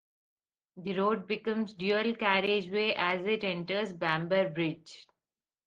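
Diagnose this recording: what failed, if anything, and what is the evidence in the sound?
Nothing failed; the speech shows no audible fault.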